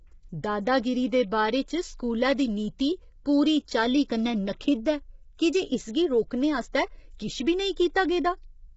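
Throughout the speech, the voice has a rough, grainy texture, with noise filling the gaps between pitch harmonics and nothing above 7.7 kHz. The heavy damage points to low-delay AAC compression, likely AAC-ELD at a rate near 16 kbps. Its short frames cannot separate closely spaced harmonics cleanly, and at so few bits the encoder smears energy across them, leaving a hoarse, buzzy quality and a clipped top band.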